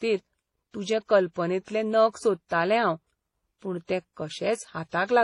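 Throughout the speech, two kinds of compression damage are heard at once: smeared, warbling MP3-style artefacts plus a separate layer of HE-AAC roughness, with nothing above 20.4 kHz. This points to transcoding between lossy codecs, likely MP3 then HE-AAC near 32 kbit/s each, rather than one codec's uniform artefacts.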